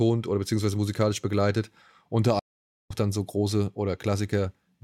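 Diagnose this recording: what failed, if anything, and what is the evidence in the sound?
The speech stops dead at 2.39 s and stays silent for about half a second, picking up again at 2.91 s. That is a playback stall, likely the player's buffer running dry or its output thread being blocked, so nothing reached the output until it recovered.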